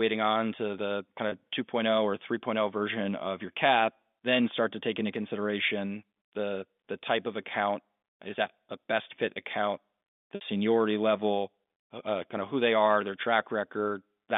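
Speech over a G.711 phone line with two short dropouts from packet loss with pitch repetition. At 1.29 to 1.32 s and 10.35 to 10.41 s the last pitch period is looped to fill the gap, giving a brief held, buzzy sound. The second gap is about twice as long, which fits two lost packets rather than one.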